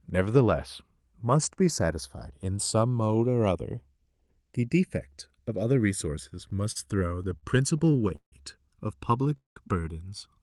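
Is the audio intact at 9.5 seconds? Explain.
No. From 9.37 to 9.58 s there is a call audio freeze: the sound stalls into a brief fading fill, then about 150 ms of silence, and resumes where it stopped. This was likely caused by delayed packets draining the jitter buffer, so nothing is lost but the audio is pushed about 192 ms later.

The channels drifting apart fault is also present here. A clock mismatch of around 100 ppm lets the inter-channel delay creep toward roughly 1 ms, heard as slow flanging when summed to mono.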